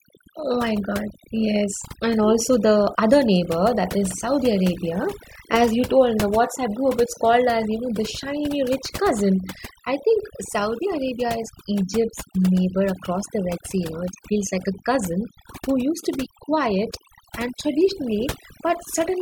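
Right through the speech there's overdone noise removal: the denoiser was pushed so hard that individual frequency bands get cut whenever they sit near its noise estimate. The background collapses into near silence sprinkled with twinkly specks, and quiet parts of the voice get cut along with it.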